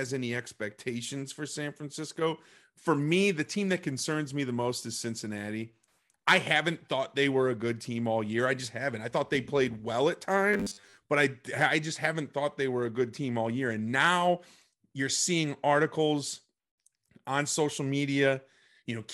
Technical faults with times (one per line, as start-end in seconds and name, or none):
10.54-10.98 robotic sound from repeated short buffers